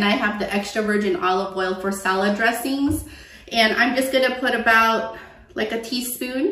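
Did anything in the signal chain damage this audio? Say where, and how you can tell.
No, no signal-chain damage heard.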